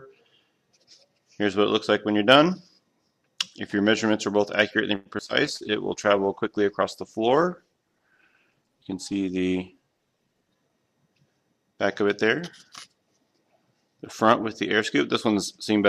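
From 4.95 to 5.64 s there's repeated packet loss: four short holes, the longest about 102 ms, papered over by stretching the previous sound, so it goes choppy and robotic.

At 5.48 s a call bitrate drop kicks in and lasts until 10.59 s. The top end gets cut from 20 kHz to 12 kHz, and the coarse, watery texture points to the rate falling from around 128 to 19 kbps.

Right after, from 5.63 to 6.27 s, there's a jitter buffer slow-down. The receiver repeats tiny slices to build a reserve, adding 42 ms, so things drag at 95% speed with the pitch unchanged.

Then from 10.26 to 10.77 s a jitter buffer speed-up trims around 70 ms to cut the backlog. It runs at 112% speed and sounds a bit rushed.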